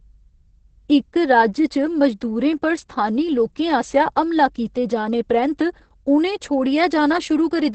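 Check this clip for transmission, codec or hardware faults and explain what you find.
The clip has one codec fault, present for its whole length: Opus voice compression at a low bitrate. Throughout the speech, nothing sounds above about 8.8 kHz, which points to Opus running its SILK linear-prediction coder in wideband mode. The damage is heavy and fits a rate near 10 kbps. At that rate the excitation signal is quantised coarsely, so the voice comes out muffled, hoarse and slightly robotic, with the airy top band missing.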